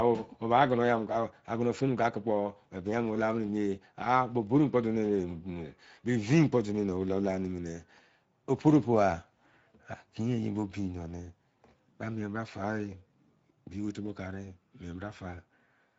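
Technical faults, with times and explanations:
Throughout, Speex codec: the speech has been squeezed through Speex, a CELP codec that models the voice with a vocal-tract filter and spends only a small budget of bits on the excitation signal driving it. The plainly audible damage, a noisy, hoarse graininess, fits a middle setting around 16.8 kbps. Nothing is present above 7.7 kHz, the ceiling of Speex's wideband mode, so the top of the sound is cut off.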